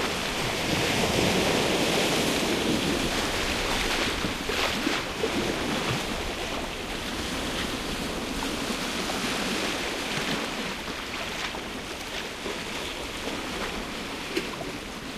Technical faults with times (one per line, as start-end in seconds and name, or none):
12.00 electrical switching spike